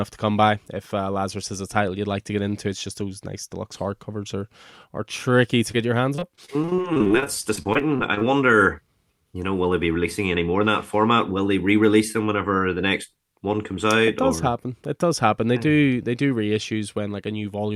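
Right after "are are tricky to", around 5.71 to 5.75 s, there's a short concealed packet loss: about 20 ms of audio didn't arrive in time, so the decoder stretched the last bit of sound to cover it. You hear a quick smear just before "your hands".

Then, just after "your hands", from about 6.15 to 8.23 s, it turns into repeated packet loss with a robotic sound. Around two dozen tiny holes, none longer than about 27 ms, get patched one after another, roughly a fifth of that stretch, so it comes out choppy with pieces missing.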